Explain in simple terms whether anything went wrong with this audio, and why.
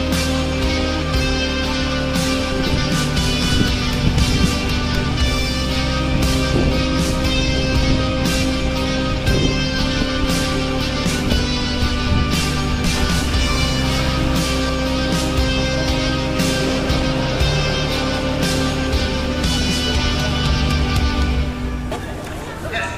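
Listening through, nothing stood out as having gone wrong with this audio.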